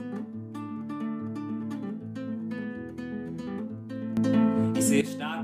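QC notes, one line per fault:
4.17–5.01 s, sudden gain jump: the sound and its background noise step up together by about 10 dB at 4.17 s and fall back at 5.01 s, with no ramp, likely from a digital gain change applied between adjacent samples.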